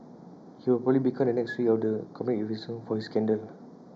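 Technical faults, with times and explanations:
Throughout, channel delay (comb filtering): one channel arrives roughly a fifth of a millisecond late, and summing to mono cancels shared content at evenly spaced frequencies, with the first notch around 3 kHz, giving the speech a fixed hollow, phasey coloration.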